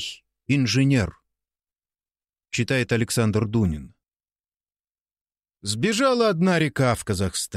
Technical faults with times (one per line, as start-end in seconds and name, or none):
none